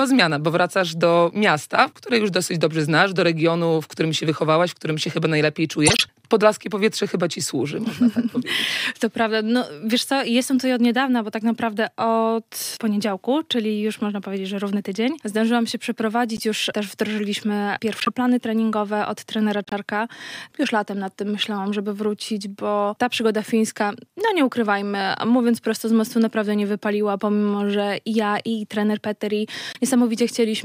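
Corrupt frames are decoded and played at 5.86–6.02 s, 16.37–16.43 s, 18.00–18.08 s, 19.65–19.73 s and 29.73–29.78 s. Damaged bits misplace energy in frequency, giving brief chirps and noise bursts. The first spans several frames and nears full scale; the rest are shorter and quieter.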